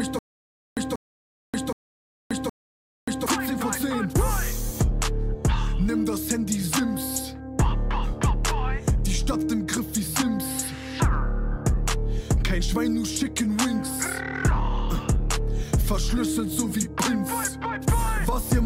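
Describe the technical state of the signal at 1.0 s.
At 1.0 s the audio is caught in a stutter with silent gaps, already under way from 0 s to 3.26 s. A burst of about 188 ms repeats every 769 ms, with 581 ms of digital silence between. A stalled stream retrying is the likely cause.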